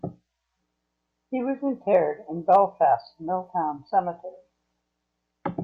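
A stage in the chain overloads twice in this speech clip, producing hard clipping: peaks at 1.95 s just reach the limit, and from 2.53 to 2.57 s they exceed it by about 2 dB. Flattened waveform tops add high harmonics, heard as brief crackle.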